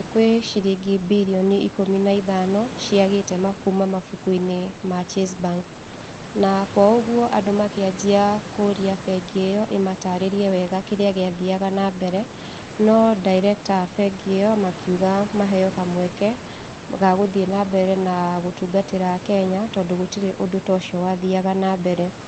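No technical faults are audible.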